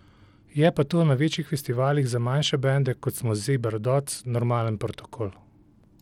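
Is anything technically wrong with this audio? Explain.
Yes. Throughout the speech, the treble is thin and flickers in and out, with a gritty noise and aliased hash riding on the sound. This is likely Bluetooth SBC compression at a small bit pool, fitting roughly 96 kbps: the top sub-bands get few bits and the rest are coarsely quantised.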